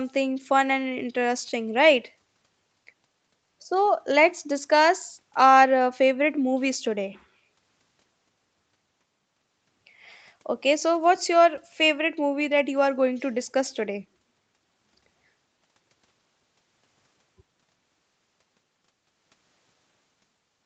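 No technical faults can be heard in this speech recording. It has passed through a call's microphone processing and an Opus call codec, so there is nothing above about 8 kHz.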